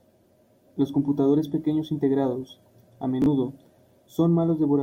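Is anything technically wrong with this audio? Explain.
Yes. Chunks out of order at 3.22 to 3.26 s: one 20 ms chunk of the speech arrives a chunk late and plays after the one that should follow it. Nothing goes missing, but the swapped order leaves three hard joins, heard as a brief jumbled stutter.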